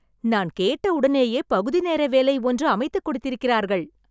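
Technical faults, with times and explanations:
Nothing technical stands out in this bit of speech; there's no glitch or problem worth flagging anywhere in it.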